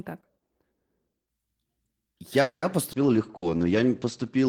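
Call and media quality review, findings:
Call audio freeze, 2.41–2.65 s. The sound stalls and the last fragment is held as a fading buzz or hiss, ending in about 100 ms of silence. The audio then resumes where it stopped, so nothing is lost but playout is now about 210 ms late. Likely cause: packets delayed in transit, leaving the jitter buffer empty. Spectrogram: the last harmonics are smeared flat and dim to a blank strip. Waveform: a decaying tail, then flatline.

Skip ahead, about 2.92–2.96 s. Playback jumps forward with almost no gap. Roughly 70 ms of audio is dropped and the two sides are spliced nearly directly, cutting the latency back by about 50 ms. Probable component: jitter buffer discard on overflow, or loss in transit. Spectrogram: an abrupt vertical seam where the formant tracks jump. Waveform: a discontinuity with a possible click.

Call bitrate drop, 2.93 s to end. The speech turns rough and muffled as the encoder falls from 32 to 12 kbps, staying at the lowest rate for about 1.4 s. 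Bandwidth shrinks from 20 kHz to 8 kHz. Probable component: sender bandwidth estimator steering Opus to coarser coding. Spectrogram: a hard ceiling at 8 kHz with nothing above, and blotchy, quantised energy below it. Waveform: little visible change apart from reduced fine detail.

Jitter buffer slow-down, 3.31–3.62 s. The speech drags at about 89% speed with pitch unchanged. Sounds are drawn out, and about 45 ms is added overall. Probable component: receiver time-stretching, repeating single pitch periods to rebuild a depleted buffer. Spectrogram: harmonics are stretched horizontally, with evenly spaced repeated cycles visible. Waveform: near-identical periods repeated in a row.

Burst of packet loss, 3.36–3.45 s, inside the slow-down. About 60 ms of speech is missing. The receiver fills the gap by extending the last sound, turned down as the gap goes on, then resumes further on. Probable component: consecutive packets lost or arriving too late, with concealment at the decoder. 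Spectrogram: frozen, flattened harmonics dimming, then a jump in the formant pattern. Waveform: repetitive decaying cycles, then a step to new material.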